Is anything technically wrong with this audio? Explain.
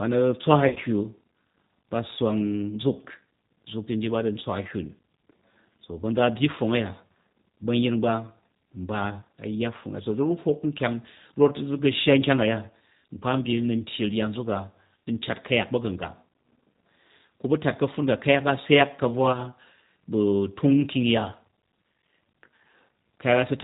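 Yes. Throughout, the speech sounds slightly rough and synthetic, with nothing above 4 kHz. This is plainly audible G.729 codec damage, consistent with an 8 kbit/s G.729A stream. The codec rebuilds each 10 ms frame from a vocal tract filter, a pitch predictor and a few pulses, so fine detail is lost.

From 0.68 to 0.79 s, the sound smears into a brief, fading buzzy tone or coloured noise, and again from 19.33 to 19.38 s. This is VoIP packet loss concealed by the speech codec. In the first event about 60 ms went missing, scattered over 80 ms with the longest gap 30 ms. The second gap points to a single lost 10 ms frame. In both, the decoder extended its last pitch and filter while lowering the gain.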